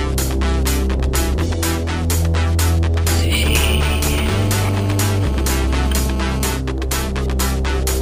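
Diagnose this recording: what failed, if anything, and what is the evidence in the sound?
A hard, raspy buzz sits under the sound from 3.45 to 6.57 s, pulsing at about 217 Hz with a dense stack of harmonics, steady throughout and roughly 14 dB below the programme. This is GSM phone buzz entering the analogue wiring: a nearby 2G phone on a call transmits in 217 Hz bursts, and the audio circuitry rectifies them.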